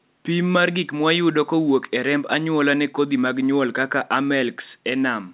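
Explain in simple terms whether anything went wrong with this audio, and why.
Nothing went wrong with this speech recording. It went through a WebRTC call path using G.711 mu-law, a telephone codec, so everything above about 4 kHz is missing and it has the narrower sound of an ordinary phone line.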